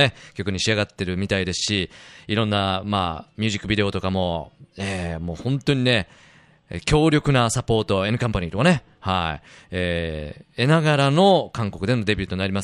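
No technical faults can be heard anywhere in the speech recording, which stays steady and continuous throughout.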